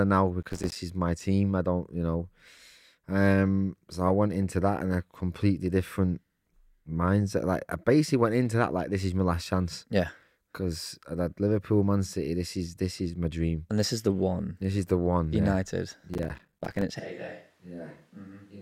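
From 0.42 to 0.76 s, and again from 16.14 to 16.82 s, a gritty crackle tears through the speech, broken by tiny silent gaps. This is processor overload crackle: dozens of audio deadlines are missed in a row, with gaps that fit buffers of about 5 ms.

At 17.0 s the speech suddenly turns roomy and hollow, with less bass and a level drop of about 10 dB. Room noise sits about 30 dB below the speech, and the change lasts to the end. This is likely a switch to a distant microphone after the close one dropped out.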